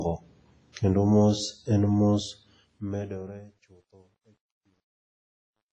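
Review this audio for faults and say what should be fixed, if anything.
Heavy codec damage runs throughout, likely WMA compression. Nothing survives above 10.6 kHz. The washy, ringing hiss fits a low bitrate near 24 kbps. Re-encode from the original at a higher bitrate.

Truncation distortion on a fade starts at 2.29 s and lasts to the end at 5.73 s. It is worst from 3.43 s. The fade keeps too few bits, consistent with 11 bits, and adds no dither. The quieter samples become coarse steps that sound gritty. Apply fades at full resolution and dither before reducing bit depth.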